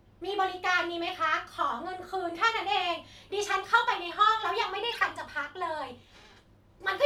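From 4.91 to 5.03 s, a corrupt frame decoded: damaged compressed data across a few frames was played anyway, throwing energy to wrong frequencies as a fairly loud glitch over the speech.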